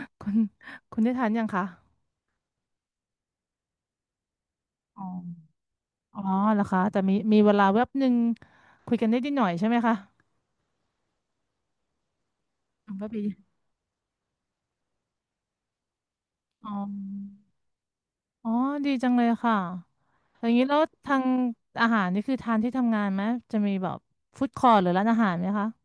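No technical faults are audible.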